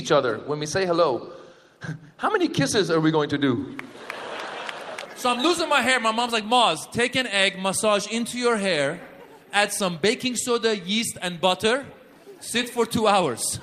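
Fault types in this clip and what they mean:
No technical faults are audible.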